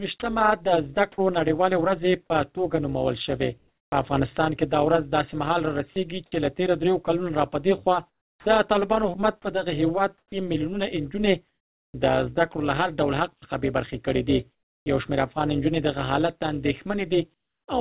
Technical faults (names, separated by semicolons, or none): overlap-add ripple; sound dropped by the voice detector; comfort noise in place of the background; sound chopped by the voice detector; onset clipped by the voice detector